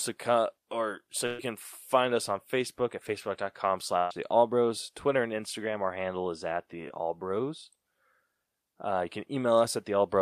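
At 1.26 to 1.40 s, between "come or so" and "can find us on", and again at 3.98 to 4.11 s, a burst of packet loss removes about 120 and 130 ms of speech. The receiver extends the last sound as a fading buzz or hiss. On a spectrogram, frozen, decaying harmonics end in an abrupt restart. At 6.89 to 6.91 s, just after "handle is at the", a short concealed packet loss patches about 13 ms by continuing the preceding sound. It is heard as a brief smear.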